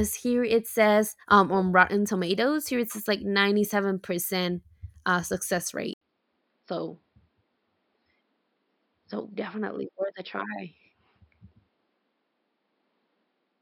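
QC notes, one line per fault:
5.93 s to end: input switched to a poorer device. After a gap of about 80 ms the speech abruptly turns duller and boxier, with nothing above 5.4 kHz, and stays that way to the end. Loudness is essentially unchanged, and a faint new noise floor sits well below the speech. This is likely a change of capture device mid-recording to one with a narrower passband and its own colouration and background noise.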